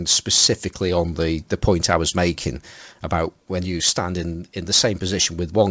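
No faults are audible in the speech, which arrives over a call path whose band stops at 8 kHz, consistent with a wideband codec such as G.722 at 64 kbps.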